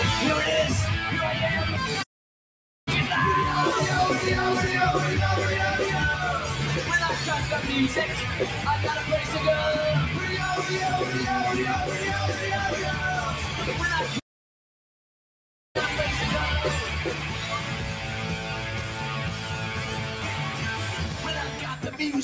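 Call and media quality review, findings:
Noise suppressor applied to music or sounds, whole clip: speech-tuned suppressor left active, treating steady tones, ambience and decays as noise. Level swings of around 5 dB; held material and tails dip while attacks pass, giving pumping and a thinned sound.

Playback stall at 2.02 to 2.88 s and 14.19 to 15.76 s: player likely starved of data or its thread blocked. Output drops to silence mid-flow for about 0.84 s, then about 1.55 s, before audio resumes.

Sound cut by the noise suppressor at 17.14 to 20.64 s, 20.81 to 21.24 s and 21.45 to 21.83 s: suppressor misclassifies these passages as noise and attenuates them further, by up to about 4 dB. Sustained and decaying parts sink; sudden onsets mostly survive. Band limit at 8 kHz from call microphone processing.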